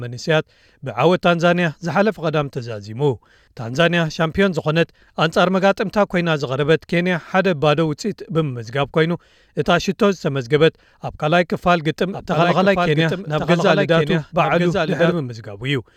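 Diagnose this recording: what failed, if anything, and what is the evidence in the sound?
Doubled audio track, 12.12 to 15.12 s. A copy lags about a second, about 5 dB down, cutting off abruptly. Likely an out-of-step edit.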